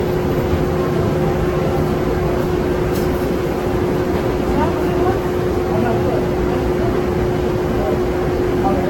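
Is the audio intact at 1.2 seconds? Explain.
No. Generation loss is present at 1.2 seconds and runs through the whole clip, so that moment is no cleaner than any other. The sound is swirly, smeared and hollow, and sharp attacks come out blurred. The likely cause is repeated lossy coding. The artefacts point to Vorbis at roughly 66 to 67 kbit/s, encoded around seven times in a row. Each pass rebuilt the signal on a shifted frame grid and quantised it again, so noise and spectral gaps piled up. Nothing remains above 17.3 kHz.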